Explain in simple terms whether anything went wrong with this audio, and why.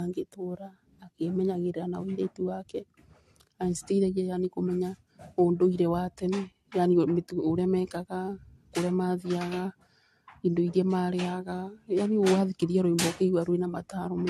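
Generation loss runs through the whole clip, from start to finish. The speech sounds swirly, hollow and smeared, consonants lose their crispness, and nothing is left above about 14 kHz. The likely cause is that the recording was saved in a compressed format, opened, and saved again around five times. Each save throws away a little more detail in slightly different places, so the damage piles up and sounds worse than a single save would.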